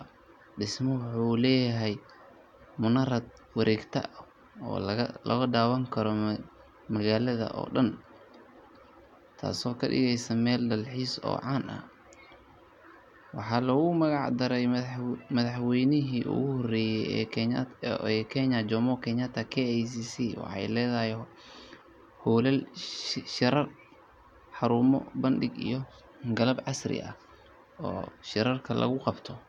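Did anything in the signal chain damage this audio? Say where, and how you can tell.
No, nothing in the signal chain has damaged this speech recording, and the signal is intact at every stage from capture to playback.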